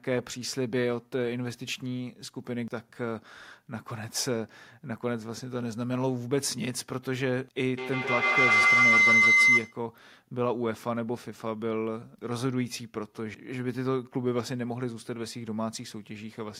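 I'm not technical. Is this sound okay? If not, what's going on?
No. From 7.78 to 9.86 seconds there is feedback howl: a piercing tone near 2 kHz, pulsing several times a second, louder than the speech.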